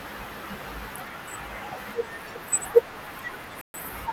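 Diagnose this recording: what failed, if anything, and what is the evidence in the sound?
A likely Bluetooth stall in the wireless playback link cuts the speech to silence from 3.61 to 3.74 s, a gap of about 127 ms. Interference would have delayed packets until the headphones' buffer emptied, and playback then waited for the resent data. Unlike network packet loss with concealment, the gap is true silence with no smeared or synthesised filler, and unlike a converter glitch it is far too long to be a click.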